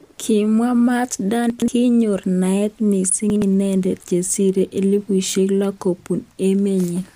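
At 1.5 s there's a stretch of chunks out of order running to 1.68 s, just before "kinyor naet". A 60 ms piece of the speech landed two chunks late, so you get a brief jumbled moment. Nothing's missing, it's just shuffled. It happens again from 3.3 to 3.42 s, between "kinyor naet" and "inendet chesirei elipushek lo", this time one chunk late, so it's a shorter scramble.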